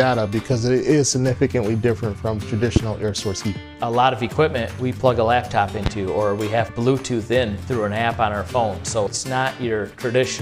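A sudden voltage step, likely from a plug, switch, static discharge or driver glitch, gets into the signal path twice, and each time the downstream circuits turn it into a short pulse. The result is a loud pop from 2.76 to 2.79 s, peaking around 20 dB above the surrounding sound, then a second from 5.86 to 5.89 s at roughly 15 dB above it. Each is a single sharp thump, with the sound continuing underneath.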